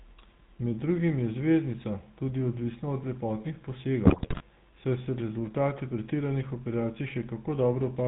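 Throughout the clip, the speech passes through the GSM full-rate codec. The coder reduces the voice to a vocal-tract filter excited by a sparse, regularly spaced pulse train, keeping only every third sample of the excitation. Nothing above 4 kHz survives, so the top of the voice is cut off. The codec damage is plainly audible as a buzzy, gravelly roughness on every voiced sound, with the character expected of the 13 kbps full-rate coder.

From 4.04 to 4.43 s, after "tudi odvisna od lepotnih" and before "saj se rezultati pretiranih", GSM bit errors corrupt the decoder's parameters. Flipped bits distort the filter, pitch and gain values, so the spectrum twists and the level jumps frame by frame. The voice breaks into squawks, pops and gargling across the whole 0.39 s stretch, which points to a run of roughly nineteen consecutive damaged 20 ms frames on a heavily errored link.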